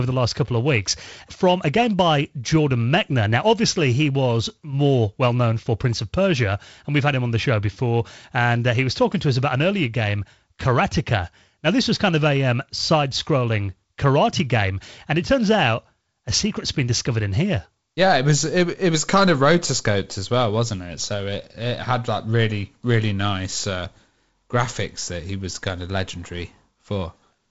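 No technical faults are audible.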